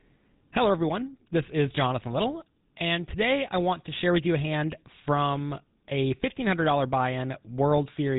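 Speech, passed through the GSM full-rate codec for its whole length. Nothing survives above 3.8 kHz, so it sounds dull and narrow. The codec rebuilds the voice from a coarse pulse train, leaving a plainly audible buzzy, gravelly roughness, which fits a 13 kbps coder.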